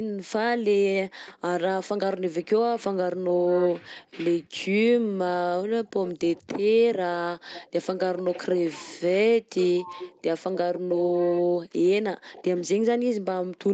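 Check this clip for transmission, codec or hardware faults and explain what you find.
One fault recurs throughout: an echo leak in seven stretches, at 1.26–1.34 s, 3.43–4.04 s, 4.43–4.66 s, 5.84–6.47 s, 7.47–9.01 s, 9.56–10.22 s and 12.32–12.62 s. A delayed copy of the speech trails it by 185 ms. It is loudest around 3.4–4.0 s, at about 10 dB below the speech, and quietest near 4.4–4.7 s, at about 30 dB down. The likely cause is a loudspeaker on one side of the call whose echo canceller let part of its microphone pickup through, so that it was sent back.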